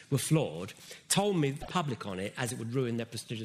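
A brief glitch from 1.58 to 1.69 s marks damaged data in the compressed stream: the decoder loses frame sync, unlike a plain dropout's clean silence.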